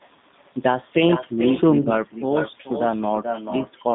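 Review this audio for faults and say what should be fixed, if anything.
A quieter, thinner copy of the speech trails every phrase by roughly 0.4 s, about 8 dB down: echo with no canceller, the far loudspeaker feeding its microphone straight back. Enabling acoustic echo cancellation on the far end would remove it.

Throughout, the speech sounds rough and slightly synthetic, confined to about 150 Hz to 3.6 kHz, which fits the 8 kbit/s G.729 codec rebuilding the voice from a coarse model. A wideband codec would restore clarity.

From 1.81 to 1.89 s the sound smears into a fading buzz or coloured noise: VoIP packet loss concealed by the speech codec, about 40 ms missing, which points to two lost packets. A larger jitter buffer or a more reliable network path would prevent it.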